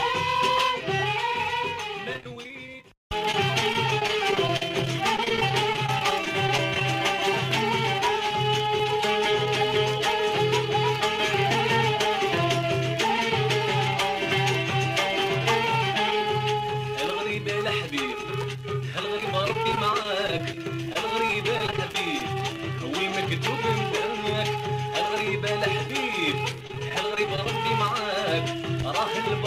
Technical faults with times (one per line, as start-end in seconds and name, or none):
2.13-3.34 repeated packet loss (robotic sound)
3.73-6.81 repeated packet loss (robotic sound)
19.18-22.21 repeated packet loss (robotic sound)
26.67-27.46 repeated packet loss (robotic sound)